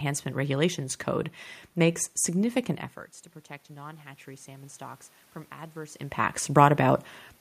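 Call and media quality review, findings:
Automatic gain rising, 3.67 to 7.06 s, after "significant efforts to protect": input level drops about 18 dB, AGC slowly adds about 4 dB, lifting voice and room noise together. Waveform envelope and spectrogram noise floor brighten gradually; talker movement near 6 s overlaps.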